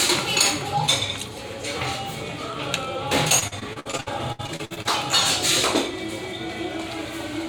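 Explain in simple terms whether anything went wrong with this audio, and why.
Between 3.39 and 4.87 s the audio turns choppy and robotic, with more than a dozen small holes punched into it. This is repeated packet loss. Pieces of the sound arrived too late or not at all, and each gap was patched by stretching out the sound just before it. That patching covers nearly half a second in total, about a third of that stretch, with the longest gap at 65 ms, which gives the stuttering quality.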